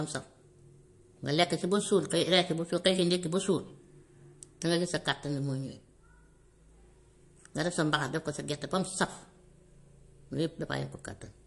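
Speech clip with audible MP3 compression throughout: nothing above 11.3 kHz, with watery, swirly artefacts, likely from low-bitrate encoding, consistent with roughly 48 kbps.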